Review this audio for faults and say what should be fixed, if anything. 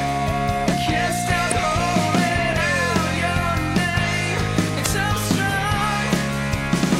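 Damaged data in the compressed stream causes two brief blips, at 1.48–1.52 s and 4.82–4.87 s, each about 44 ms long. Corrupted bytes make the decoder misread frames and lose sync until it finds the next frame header. Fix this by checksumming the file in transit and re-fetching it from a clean source.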